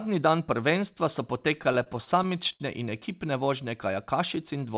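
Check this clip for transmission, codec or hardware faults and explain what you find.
One transmission fault: repeated stalls (stutter) in the speech between 1.64 and 2.62 s, starting just after "dan prvenstva so" and clearing before "in ekipne vožnje". Packets reached the receiver late or more slowly than they were being played, so the jitter buffer kept running dry. There are nine gaps in that stretch. Each time, the receiver stretched the last sound until fresh audio arrived, fading it in the longest waits, up to 70 ms. That concealment fills about 167 ms, roughly a sixth of the span, and no speech is lost, but the delivery drags and hiccups through that second. The call codec path itself, with nothing above 4 kHz as expected of G.711 mu-law, adds its usual narrowband coding noise.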